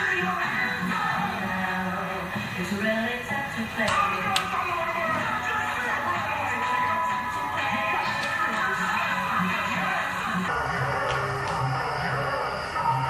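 From 10.48 s to the end, a wrong sample rate slows the audio to 0.726 times its speed and lowers it about 5.5 semitones, which fits 44.1 kHz material played at 32 kHz. A spectrogram shows everything shifted down and stretched in time.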